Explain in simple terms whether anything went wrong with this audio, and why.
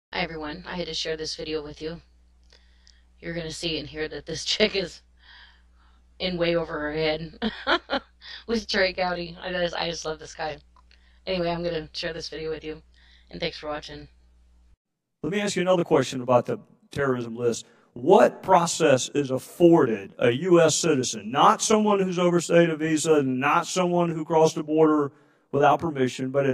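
Channel delay (comb filtering) runs through the whole recording, from start to finish. One of the two original channels arrived roughly 20 milliseconds late, and then both were mixed into one. Where the two copies line up out of step, they cancel each other at evenly spaced pitches, starting around 20 Hz. With a gap that long, the audio comes across as rough, as if it were doubled.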